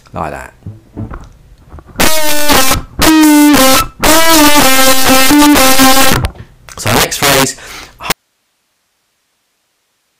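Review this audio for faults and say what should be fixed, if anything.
The whole clip has integer overflow. The level is driven about 14 dB past full scale, and instead of being clamped, the peaks wrap around to the opposite sign. Something like a few percent of samples jump across the full range that way, so every loud moment comes out as a harsh, violent crack rather than the softer flattening you'd get from clipping. To prevent it, use saturating arithmetic or a limiter before the integer conversion, and leave some headroom.

At 8.12 s the signal drops out abruptly and never comes back. From there to the end there's only hiss, sitting about 55 dB below the normal level. This is an audio dropout to a faint residue: the wanted signal was likely lost upstream while everything after the break stayed live, which is why the gap holds a noise floor rather than true silence or a fade. To prevent it, monitor the source connection and log any input loss so a dropped feed gets caught during recording.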